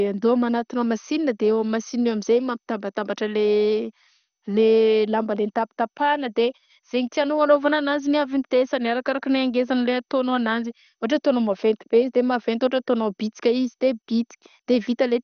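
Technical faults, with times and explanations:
Throughout, MP2 compression: speech sounds dull and gurgling with nothing above 6.5 kHz, likely from a low bitrate starving upper sub-bands; the spectrogram shows flickering, blocky bands.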